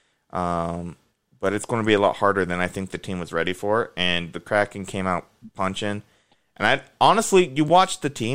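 At 1.62 s, between "but it's" and "going to be a", and again at 7.68 s, a Bluetooth stutter occurs: a brief repeated slice of about 14.5 ms, consistent with a single lost packet being covered by replaying the previous buffer before the speech resumes further on.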